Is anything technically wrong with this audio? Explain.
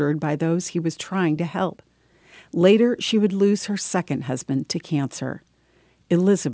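Yes. Aliasing runs throughout: the speech was downsampled, likely to 16 kHz, without filtering, so energy above 8 kHz folds back, making sibilants gritty, roughly 25 dB down.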